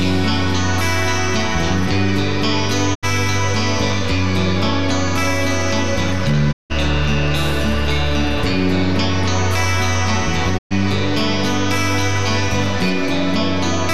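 The audio cuts out three times, each time with a quick fade of about 20 ms into silence before it resumes: from 2.93 to 3.05 s, from 6.51 to 6.72 s, and from 10.57 to 10.73 s. These are digital broadcast dropouts. The receiver muted while it had no valid frames, so about 72 ms, 168 ms and 120 ms of programme are missing, which points to short runs of corrupted or lost frames.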